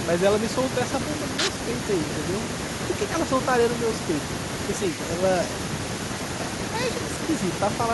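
No technical faults are audible.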